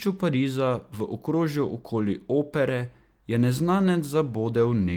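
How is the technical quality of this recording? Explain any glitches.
No glitches are audible.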